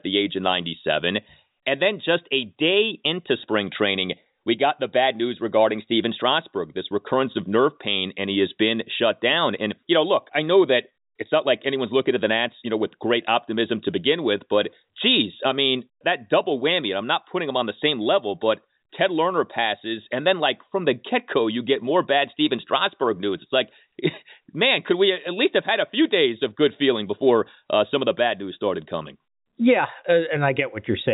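No technical faults can be heard in this speech.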